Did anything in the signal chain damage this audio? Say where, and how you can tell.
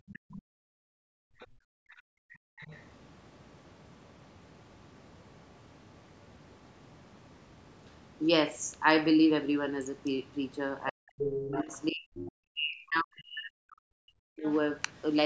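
Yes. The damage is in call processing, at the echo canceller. From 0.00 to 2.58 s the room background is gated: while the loudspeaker plays, the canceller clamps the microphone, dropping the background by about 38 dB for roughly two seconds in total before it recovers.

The other side's voice is leaking through as a second voice at 0.10–0.40, 1.39–2.02, 2.58–2.78, 11.18–12.32 and 14.43–14.51 s. It is mostly well below the talker, but loudest at 11.18–12.32 s, only around 10 dB down. The likely cause is residual loudspeaker echo that the canceller failed to subtract.

Speech is suppressed in double talk from 10.89 to 14.46 s. The talker's level dips by up to around 40 dB, across roughly three seconds, while the far-end voice leaks through at 11.18–12.32 and 14.43–14.51 s. The canceller likely could not separate the near talker from the echo and attenuated both together.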